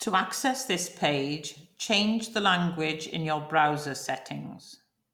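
No technical faults can be heard anywhere in it.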